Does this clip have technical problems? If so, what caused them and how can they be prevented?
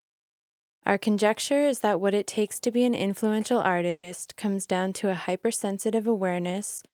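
Yes. A call audio freeze occurs from 3.89 to 4.05 s, between "to be an influential" and "comes down to". The last sound is stretched into a fading buzz for about 140 ms, then drops out briefly. The audio then resumes where it stopped, with nothing lost but the timing pushed 140 ms later. The likely cause is packets delayed in transit, leaving the jitter buffer empty. A steadier network path or a deeper adaptive jitter buffer would prevent it.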